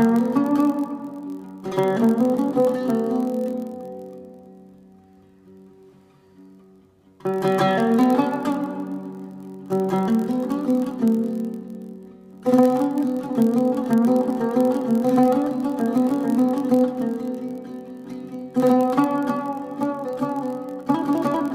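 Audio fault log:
throughout: block size mismatch (padded). A steady buzz at 43.1 Hz sits under the sound for the whole clip. Each block handed downstream falls slightly short of what the next stage reads, and the remainder is filled with zeros. That inserts a very brief silent gap once per block, and the gap's repetition rate fits a 1024-sample read size. The added silence lowers playback speed to 0.999 times normal while pitch stays essentially unchanged.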